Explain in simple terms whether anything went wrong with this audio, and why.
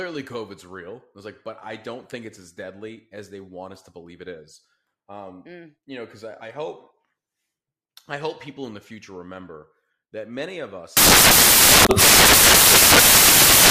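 At 10.97 s, right after "remember that many of", the rest of the clip turns into loud, harsh noise: samples built from the wrong bytes. Each sample's bytes are read in the wrong order or position, so constant tiny changes become huge jumps. Unlike background hiss, this noise is loud and harsh.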